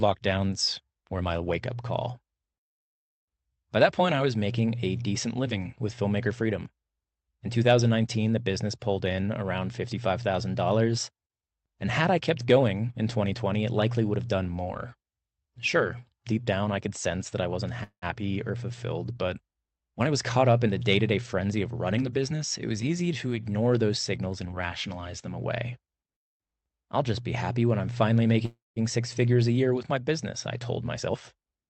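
At 17.83 s, just after "sense that I wasn't", there is a call audio freeze lasting about 0.22 s. The last sound is stretched into a fading buzz. It ends in about 80 ms of silence. The sound then carries on from where it stopped, so nothing is lost, but it now runs about 186 ms late. Packets were likely held up in transit, leaving the jitter buffer empty.

From 19.86 to 22.03 s, starting after "or fulfilled but" and ending before "the business it was", a jitter buffer speed-up follows. The buffer holds more audio than its target. To reduce that delay, the receiver cuts out tiny pitch-period slices again and again. Roughly 200 ms disappears. The sound runs about 8 percent fast at unchanged pitch and feels slightly rushed.

A second freeze occurs from 28.45 to 28.79 s. The fill is longer here, about 307 ms. About 170 ms of it is silence before the audio resumes. The same stall behind the jitter buffer likely applies, so nothing goes missing, but the delay grows again.

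From 30.96 s to the end, after "my business I told", a second speed-up runs at 125 percent. About 200 ms is trimmed in under a second, so this stretch sounds clearly hurried.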